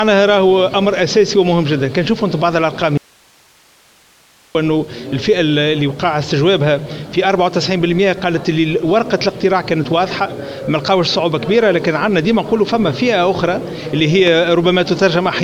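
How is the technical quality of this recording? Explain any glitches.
Two glitches stand out. From 2.98 to 4.55 s there's an audio dropout to a faint residue. The sound cuts out abruptly for about 1.6 s, leaving only hiss roughly 35 dB down, likely because the input lost signal while the path stayed live. Then at 14.27 to 14.30 s there's a loud pop. It's a single sharp thump about 10 dB above the sound, which carries on underneath, likely from a brief voltage spike such as a plug or switch transient.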